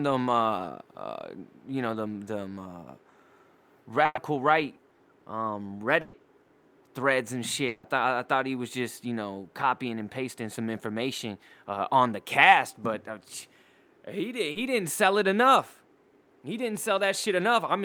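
At 4.05 to 4.19 s and again at 6.01 to 6.15 s there is a burst of packet loss. Each time about 120 ms of speech never arrived, and the receiver stretched the last sound to cover it. That gives a held buzz or a hiss that fades. The first gap ends with about 20 ms of silence before speech resumes further on. The second goes straight back into speech. On a spectrogram, each one shows the last sound frozen flat and dimming, then an abrupt jump to new content.

From 7.67 to 7.85 s, about 160 ms of speech is lost. In its place the last sound carries on as a fading buzz or hiss, with no silence before the speech returns mid-stream. This is likely a long network dropout, in which audio stopped arriving for a stretch. Here the whole gap was filled rather than left quiet. In the waveform the envelope slides down smoothly instead of following the syllable shapes around it. The spectrogram shows a smeared, repeated texture before the sharp return.

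At 14.51 s, roughly 40 ms of short concealed packet loss leaves a brief smear in the speech. The decoder patched that tiny hole by continuing the preceding sound and then blending back into the real signal, so the moment comes across as a wobble. On a spectrogram it shows as a short, blurred patch where fine detail is lost. The waveform has a small section that looks copied rather than naturally varying.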